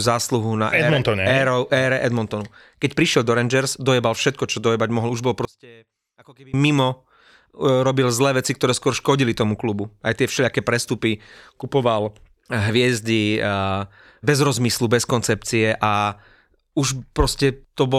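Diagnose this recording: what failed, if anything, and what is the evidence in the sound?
A polarity reversal on one stereo channel, likely from a swapped conductor in the analogue wiring or a routing fault, occurred between 5.45 and 6.54 s. With one channel inverted, the speech common to both channels cancels when they are combined to mono, so the level falls by about 27 dB for just over a second. What remains is only the small difference between the two sides, heard as a faint trace of the speech until full level returns.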